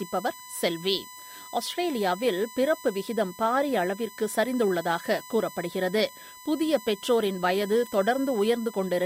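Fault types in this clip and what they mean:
USB whine: A steady 1 kHz tone sits under the sound for the whole clip, strongest at that pitch and roughly 20 dB below the signal. It comes from the USB bus drawing current in 1 ms frames, which leaks in through power or ground.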